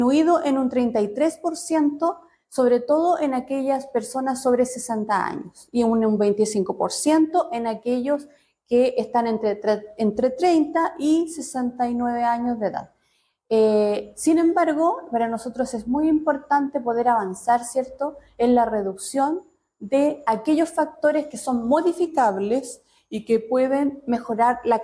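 From 22.07 to 24.08 s the audio slows and drops in pitch together. This is a wrong sample rate fault. The samples play about 8% too slowly, a 0.92 ratio, lowering the pitch by about 1.5 semitones. That fits 24 kHz material played at 22 kHz without conversion.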